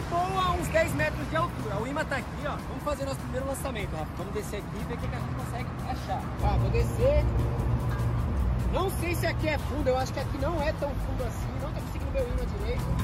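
Nothing here stands out as a technical fault; the audio runs along steadily without any glitch, gap or disturbance catching the ear.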